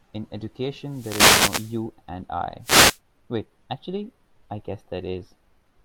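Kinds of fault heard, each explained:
Wireless microphone noise hit: The analogue FM radio link from the microphone fades when reflected signals cancel the direct one. The receiver then has too little signal, and its own noise rises into the audio. Here it is a brief swish of static over the speech. The first hit runs from 0.84 to 1.86 s, about a second long. A shorter one follows from 2.61 to 2.99 s.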